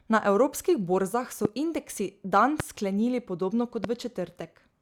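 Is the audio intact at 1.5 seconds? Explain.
No, there's a loud pop right around there, from 1.45 to 1.47 s, between "evropskih borzah so" and "indeksi dan sklenili podobno". It's a single sharp hit that jumps well above the speech, which carries on underneath. It's likely a stray voltage spike, from a plug, switch or static, landing on the signal.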